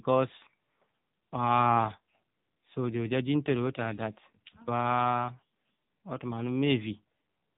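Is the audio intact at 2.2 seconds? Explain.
No. At 2.2 seconds, as across the whole clip, the speech sounds buzzy, synthetic and boxed-in, with nothing above 4 kHz. This is heavy AMR narrowband mobile codec damage: a pulse-driven vocal-tract model squeezed to a low bitrate, which fits the 6.7 kbps mode.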